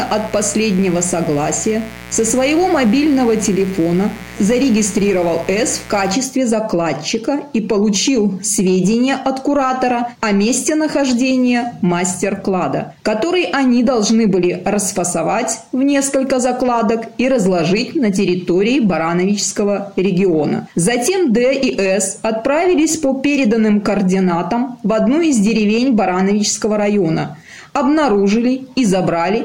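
From the start to 6.14 s a steady, raspy mains buzz sits about 20 dB under the sound. Sharp switching spikes, perhaps from a dimmer, rectifier or missing shield, leak in twice per 60 Hz cycle, spreading harmonics up to several kHz.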